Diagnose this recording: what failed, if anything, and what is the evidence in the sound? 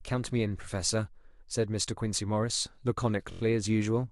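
Repeated frames at the codec or storage stage. From 3.31 to 3.40 s, one 23.2 ms block of speech plays four extra times, a quick mechanical stutter that stretches the audio by about 93 ms. That fits a single compressed frame being written or sent repeatedly, with the decoder faithfully replaying each copy.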